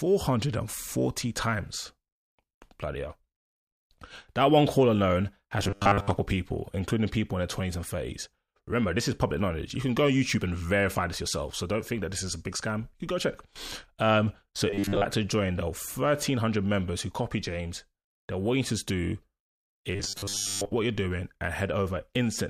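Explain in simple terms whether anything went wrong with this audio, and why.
Something did go wrong, in three short patches: 5.60 to 6.11 s, 14.70 to 15.05 s, and 19.95 to 20.73 s. There the speech turns into a stiff, metallic buzz at 100 Hz that still roughly tracks the talking. That's robotic sound from repeated short buffers, likely caused by audio arriving too slowly, so the software kept replaying a 10 ms slice to fill the gaps. Most of what you hear in those spots is repeats, not real speech.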